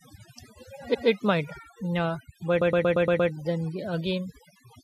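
Overdone noise removal runs throughout: bands near the noise estimate are pulled down, leaving near-silent gaps with twinkling specks, not broadband hiss. Repeated frames appear at 0.93 to 1.07 s, where a 139 ms block plays twice, and at 2.60 to 3.30 s, where a 116 ms block stutters six extra times, adding 0.7 s. Unlike a dropout, no audio is lost.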